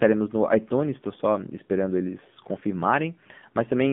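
From start to finish, the speech carries AMR narrowband mobile codec damage. The band runs from about 150 Hz to 3.5 kHz, and the voice has a plainly buzzy, synthetic quality from the pulse-driven vocal-tract model. This fits a low AMR-NB mode of about 7.4 kbps.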